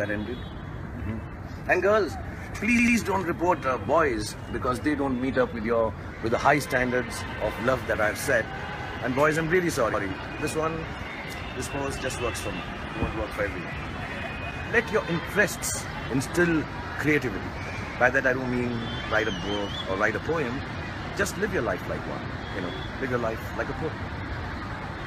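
The sound has a repeated buffer stutter at 2.79 to 2.97 s and 9.94 to 10.03 s. A 93 ms piece replays with hard joins, twice then once, which fits a 4096-sample buffer.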